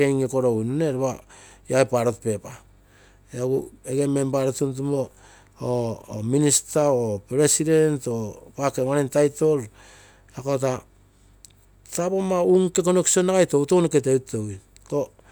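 No technical faults can be heard anywhere in the recording, and the signal holds steady throughout.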